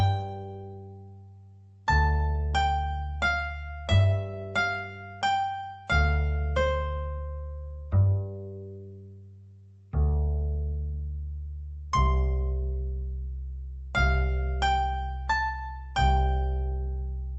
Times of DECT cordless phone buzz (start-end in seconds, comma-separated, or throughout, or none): none